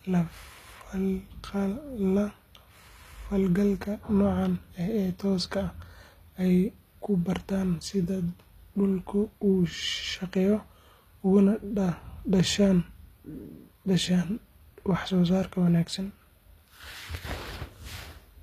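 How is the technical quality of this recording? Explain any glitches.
Technical quality is compromised by plainly audible codec damage throughout. Across the whole clip the treble of the speech sounds gritty and lispy on s sounds, likely from HE-AAC compression at a low bitrate around 24 kbps: the upper band is synthesised by copying lower bands upward, so its harmonics don't match the real ones. A spectrogram shows repeated, smeared texture up high and nothing above 14.9 kHz.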